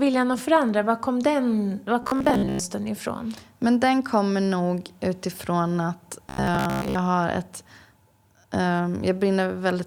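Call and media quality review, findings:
Robotic sound from repeated short buffers, speech, 2.03–2.59 s and 6.29–6.95 s. Likely cause: audio starved upstream, playback looping the last buffer to fill gaps. Repeat rate 66.8 Hz points to buffers of roughly 15 ms. Around two thirds or more of the real signal skipped in each stretch. Result: a fixed 66.8 Hz metallic buzz, speech only loosely tracked during both windows.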